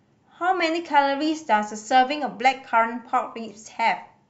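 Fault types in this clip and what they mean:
No fault types can be heard in the clip, so there are none to explain.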